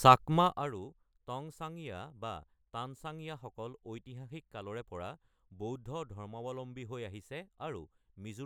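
From 0.37 to 0.74 s, just before "টংচাংয়া বা", there is zipper noise: a level drop of roughly 15 dB is applied in unsmoothed steps, around a hundred per second, each leaving a small click that together form a fast ticking zip across the speech.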